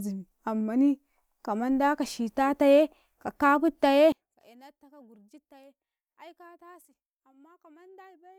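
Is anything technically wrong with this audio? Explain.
Yes. From 4.12 s to the end of the clip there is a fault consistent with one channel inverted: the likely cause is that one stereo channel's polarity has been flipped, so the speech, which sits equally in both channels, cancels when they are combined to mono. The level drops by about 28 dB and the centred speech and its low end all but disappear, leaving only a faint residue of whatever differs between the two sides.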